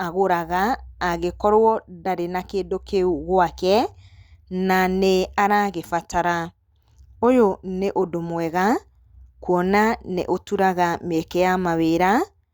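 No technical faults can be heard anywhere in the recording of speech.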